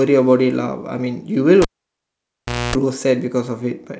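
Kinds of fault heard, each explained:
Cable pulled and plugged in, 1.62 to 2.75 s: a live lead is yanked from its socket and pushed back in, so the speech breaks with a sharp pop, drops to near silence for about 1.08 s, then a burst of 60 Hz mains buzz lasting about 0.26 s is heard as the plug's tip touches the contact before the ground seats, and a second pop marks the signal returning.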